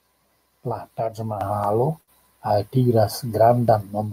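A microphone volume step-up at 1.41 s: the call software judged the input too quiet and raised the device gain by about 7 dB at once, lifting voice and background together. Audio missing between chunks at 1.64 s: a skip of roughly 20 ms with the join closed up, likely from chunked recording losing a piece at the boundary. A short stall from a late packet from 2.01 to 2.10 s: the jitter buffer ran dry, so the last sound was stretched for 63 ms until the packet arrived, with nothing lost. A second microphone volume step-up at 2.49 s raises the level by about 4 dB more. Another gap between chunks at 3.68 s skips roughly 20 ms, two seconds after the first, matching a 2 s chunk length.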